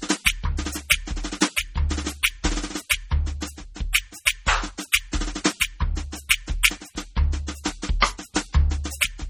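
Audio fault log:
Throughout: MP3 compression. The music has a watery, swirling texture, with metallic chirps on bright attacks and nothing above 18.3 kHz. This is likely from heavy data reduction at a very low bitrate, around 32 kbps. Short of bits, the encoder drops weak frequency lines, so they flicker on and off between frames.
4.92 s: pre-echo. A short hiss of about 16 ms comes just before a sharp attack, and the attack itself sounds softened. The attack falls late in a transform block, so quantisation noise sized for the loud onset spreads back into the quiet moment before it.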